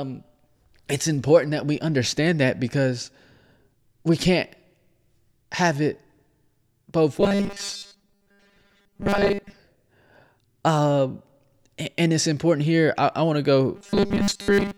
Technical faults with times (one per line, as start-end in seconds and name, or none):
7.21-9.59 robotic sound from repeated short buffers
13.76-14.78 robotic sound from repeated short buffers